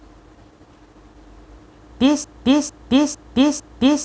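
A speech recording that, from 2.24 s to the end, turns into a broken-record loop: a fragment of about 0.45 s repeats exactly, back to back, four times, and the speech that should follow never arrives. The likely cause is a stalled player, encoder or stream resending its last buffered piece.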